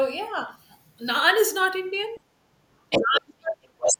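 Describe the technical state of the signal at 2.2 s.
At 2.2 s a brief, very faint second voice comes to an end, having started at 2.15 s, a scrap of the other side's voice leaking through, sitting far below the main speech. It is likely loudspeaker playback reaching the microphone that the echo canceller failed to remove. On a spectrogram it shows as a weak smear of harmonic energy over those 50 ms; in the waveform it is barely distinguishable from the foreground signal.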